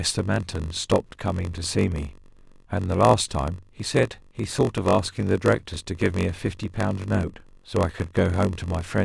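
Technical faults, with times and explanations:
throughout: block size mismatch (padded). Shorter written blocks, which fits a 512-sample read size, are zero-filled, causing a 46.9 Hz buzz and speech slowed to 0.938x.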